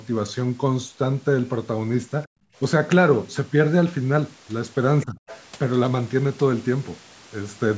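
Background gated by the echo canceller, 2.27 to 2.54 s: the room sound behind the talker drops away abruptly, sinking by about 40 dB at its deepest, then returns roughly a third of a second later. This happens when the canceller hears the far end on the loudspeaker and clamps the microphone path hard to keep echo out. The ambience is lost along with any echo, leaving a brief hole of near-silence.

Other side's voice leaking through, 5.01 to 5.05 s and again 5.27 to 5.42 s: a faint second voice, fragmentary, sits under the talker. The first scrap is brief and roughly 25 dB below the main speech, and the second is longer and louder at around 20 dB down. This is likely loudspeaker playback reaching the microphone and slipping past an echo canceller that didn't fully subtract it.

Speech suppressed in double talk, 5.05 to 5.18 s: right between those two leaks, the talker's own voice dips by around 20 dB for a little over a tenth of a second, sounding briefly swallowed. 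With both sides talking at once, the canceller likely can't tell the near voice from the echo and pulls everything down together. The microphone processing's band limit, with nothing above 8 kHz, sits underneath all of this as expected.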